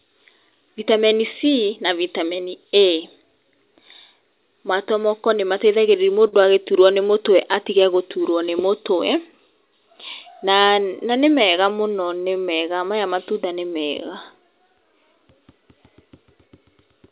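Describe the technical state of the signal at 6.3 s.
A short stall from a late packet occurs at 6.28 to 6.42 s, just before "agĩtũrwo nĩ mũtwe atige". The jitter buffer ran dry, so the receiver stretched the last sound by 43 ms, then resumed; nothing drops out, but it hangs with a faint buzz or dip.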